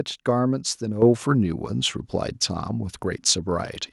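At 1.02 s the level of the speech and the background noise jumps up together by about 8 dB, all at once. That's the microphone volume stepping up: the call software decided the mic was too quiet and bumped the device's input gain in a single move instead of easing it in. Because it happens at the input, the room noise rises right along with the talker, so it sounds like someone turned a knob.

From 1.75 s to the end, the sound goes dull and gritty. That's a Bluetooth SBC bit pool drop. The link got congested, so the phone cut the encoder's bit budget to keep audio flowing. Going by how it sounds, that fits a bit pool falling from 31 to 15, roughly 105 kbps. With fewer bits, the top sub-bands are left nearly empty and the rest are quantised coarsely. You lose the treble and a grainy noise sits under the speech.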